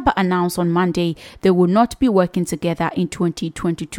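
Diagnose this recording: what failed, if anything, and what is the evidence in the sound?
Nothing in the signal chain of the speech recording has failed: no stage from capture through playback leaves an audible fault in the sound.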